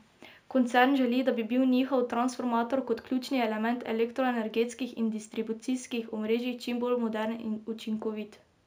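Imaging from linear upsampling, throughout: straight-line interpolation dulls the top and leaves faint mirror images from 8 to 16 kHz, heard as metallic shimmer on sibilants.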